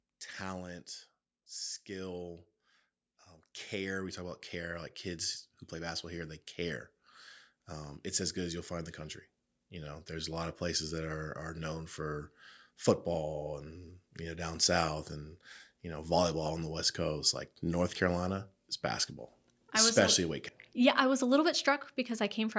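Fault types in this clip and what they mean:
automatic gain falling: From 0.11 to 0.93 s the speech begins loud and then sinks by about 3 dB, its background dropping in step with it. The automatic gain control judged the input too loud, or its background too strong, and eased its gain down over that stretch.
automatic gain rising: Between 3.71 and 6.46 s the speech and the noise behind it swell together, climbing by about 8 dB over nearly three seconds. The automatic gain control judged the input too quiet and steadily raised its gain to compensate.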